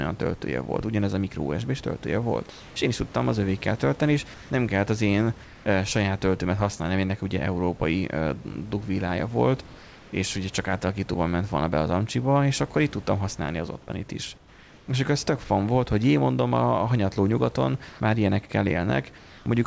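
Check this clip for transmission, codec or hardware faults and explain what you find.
Two voice-detector faults show up: repeated comfort-noise fills in the speech pauses and one choppy stretch.

Comfort noise in place of the background at 2.50–2.76 s (after "a micro usb töltője", before "én is tudtam az"), 4.34–4.50 s, 5.44–5.66 s (between "nem kellett az én" and "saját töltőmet használni mert"), 9.66–10.12 s (before "ugye csak átalakítóban ment"), 17.88–18.00 s and 19.18–19.46 s. The sender likely stopped transmitting during pauses, so the receiver filled them with synthetic noise. The real room noise, about 26 dB below the speech, briefly turns smooth and featureless, up to about 3 dB quieter.

Sound chopped by the voice detector from 13.86 to 15.50 s. The detector likely switched on and off repeatedly, so about 560 ms of sound was replaced by fill. The speech sounds clipped, with holes in it.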